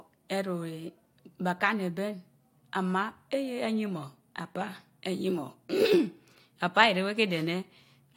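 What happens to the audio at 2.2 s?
Nothing goes wrong at 2.2 s; the speech runs through that moment intact, with no dropout, click or other fault.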